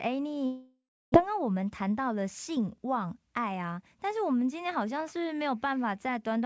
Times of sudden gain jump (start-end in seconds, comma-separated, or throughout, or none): none